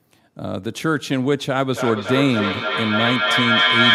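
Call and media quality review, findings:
Feedback echo between two devices, 1.74 s to end of clip. Speech returns at a steady interval of roughly a third of a second, each pass thinner and more ringing, building to about 3 dB above the direct speech instead of decaying. Probable cause: two endpoints in one room on the same call, where each echo canceller removes only its own playback. Unlike single-device echo or room reverb, the repeats stack and grow.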